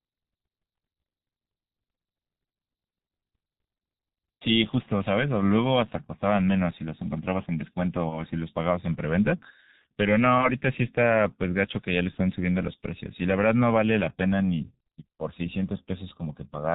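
Speech, coded throughout with the G.723.1 codec. Nothing reaches above 4 kHz. The voice sounds muffled and hoarse, and consonants smear. The damage is heavy, which fits the codec's low rate of around 6.3 kbit/s and its slow 30 ms frame updates. VoIP packet loss concealed by the speech codec appears twice, from 8.09 to 8.20 s and from 12.11 to 12.17 s. Each gap fits one lost 30 ms frame. The decoder stretches its last sound into a buzzy tone or coloured noise that fades, and the voice stays weak briefly afterwards.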